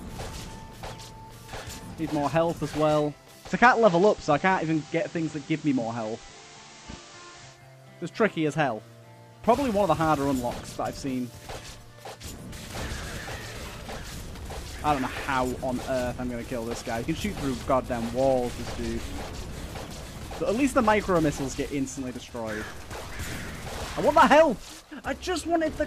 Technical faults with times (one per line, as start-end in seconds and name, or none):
3.41-7.61 digital radio blending to analogue